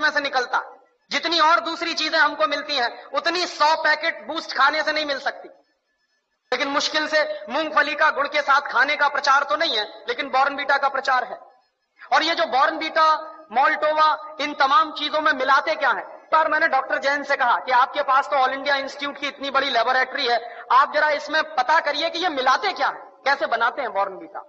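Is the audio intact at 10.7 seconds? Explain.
Yes, the audio at 10.7 seconds is intact, with no dropout, click, distortion or other fault audible at that moment.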